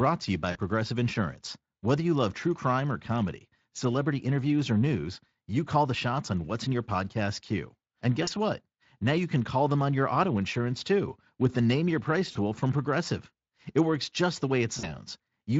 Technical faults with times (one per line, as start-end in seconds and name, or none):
0.51-0.59 VoIP packet loss concealed by the speech codec
8.23-8.29 VoIP packet loss concealed by the speech codec
12.31-12.37 VoIP packet loss concealed by the speech codec
14.79-14.95 VoIP packet loss concealed by the speech codec